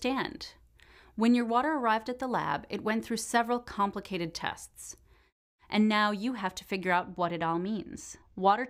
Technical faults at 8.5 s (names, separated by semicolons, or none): channel delay (comb filtering)